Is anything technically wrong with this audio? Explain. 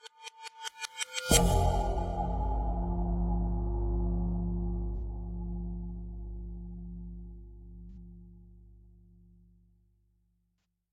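Yes. AAC frame loss with concealment occurs at 1.93–2.00 s, 4.96–5.02 s, 7.90–7.97 s and 10.61 s. Each gap is about 43 ms, consistent with one missing AAC frame, and the last is about 85 ms, suggesting two. The decoder rebuilds the missing spectrum from the preceding good frame, so each spot sounds briefly smeared, noisy or phasey rather than silent.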